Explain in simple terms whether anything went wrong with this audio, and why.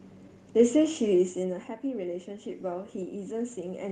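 From 1.35 s to the end, automatic gain rising: after the talker moved back around 1 s, the system slowly raised its gain, swelling voice and room noise together.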